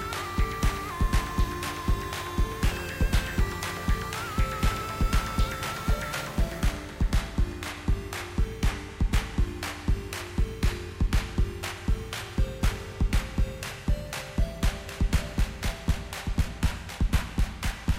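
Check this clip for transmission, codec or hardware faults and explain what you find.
One fault is present: a doubled audio track from 14.88 s to the end. A second, somewhat quieter copy trails about a second and a half behind, starting abruptly, likely from a slower capture path mixed back in.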